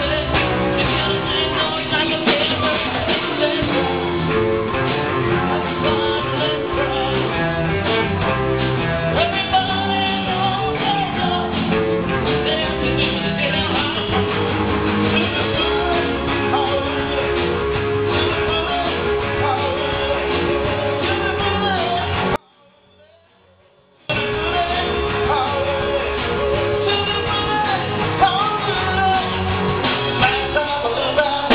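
An audio dropout to a faint residue runs from 22.36 to 24.10 s. For 1.74 s the sound cuts out abruptly, leaving only a faint leak roughly 35 dB down, likely a brief loss of the main signal while the path after the break stayed live.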